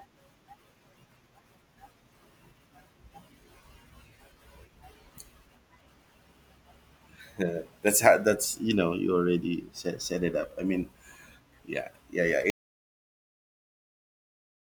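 At 12.5 s the speech just stops dead and never comes back. The last 2.2 s or so, right to the end of the clip, are silence, with no room tone or hiss underneath, so it's an audio dropout to silence rather than a pause. The likely story is that the input went away, say a device disconnecting or a link dropping, while the recorder kept writing silence. Whatever was said after that point is lost.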